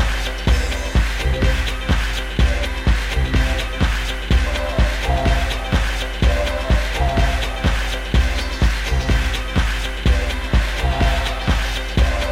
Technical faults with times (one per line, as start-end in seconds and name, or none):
none